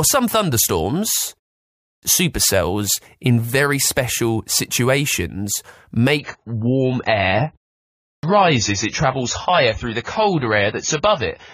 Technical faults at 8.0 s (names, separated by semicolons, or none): adaptive stream at a lower bitrate; clipped start after a pause